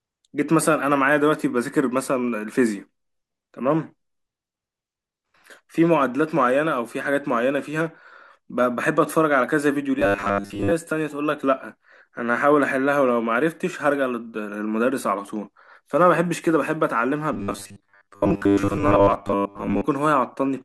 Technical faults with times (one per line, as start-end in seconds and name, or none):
9.99-10.72 robotic sound from repeated short buffers
17.33-19.83 robotic sound from repeated short buffers